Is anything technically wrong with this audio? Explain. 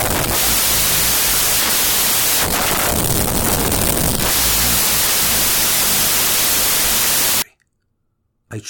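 Yes. From 0.00 to 7.42 s the speech sits under loud, harsh noise, dragged to half speed and an octave low. This is a wrong sample width fault, which fits 32-bit samples read as 16-bit: each sample splits into two values, one keeping the signal's top bits, the other pure low-order noise.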